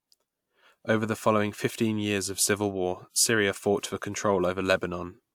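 No technical faults are audible anywhere in the recording.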